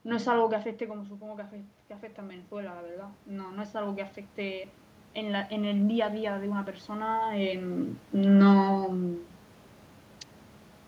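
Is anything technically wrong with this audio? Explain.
Yes. From 0.78 to 7.84 s, automatic gain rising: the input dropped by about 12 dB, so the gain control gradually added about 12 dB, swelling voice and room noise together.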